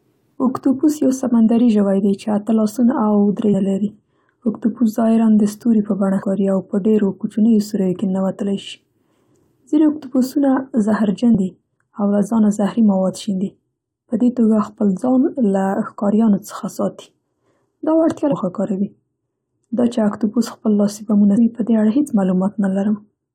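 Short chirps and blips break into the speech at 3.53 s, 6.22 s, 11.32 to 11.35 s, 18.31 to 18.33 s and 21.36 s. Each is a brief burst of garbled sound, the longest at about 11.3 s. They come from damaged data in a compressed stream: stretches of corrupted bytes that the decoder misreads. It loses frame sync and searches for the next valid frame header, producing these squawks.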